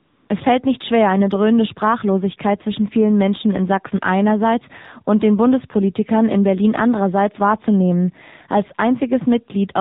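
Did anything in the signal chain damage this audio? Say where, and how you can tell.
Yes. At the codec stage, the speech has been through the AMR narrowband mobile codec, AMR-NB at 7.4 kbps. Everything above 4 kHz is gone, and the low bitrate leaves the voice plainly buzzy and synthetic throughout, because the vocal-tract model is driven by only a few pulses per subframe.

In call processing, the first 0.3 s is AMR comfort noise. The sender flagged silence and transmitted no speech frames for 295 ms, so the receiver generated a smooth, steady synthetic noise from a coarse level and spectrum description instead of the real background.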